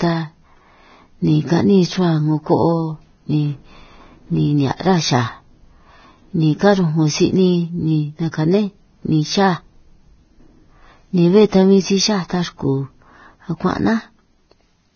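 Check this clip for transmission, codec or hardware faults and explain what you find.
Two faults stand out in this speech: grainy, hissy coding damage throughout, and one short pre-echo.

Across the whole clip the speech sounds dull and hoarse. Nothing reaches above 6.6 kHz, and the treble that remains is rough and sandy, with consonant onsets blurred. This points to heavy Vorbis compression as the likely cause, at a low rate that fits roughly 18 kbps. Its encoder lowered the cut-off and quantised the upper residue so coarsely that fine detail turned into noise of similar energy.

At about 8.32 s a brief hiss, roughly 20 ms long, comes just before a sharp attack, and the attack itself sounds soft and smeared. This is pre-echo. The transform block containing the attack spread its quantisation noise evenly across its whole length, so noise sized for the loud onset also filled the quiet instant leading up to it.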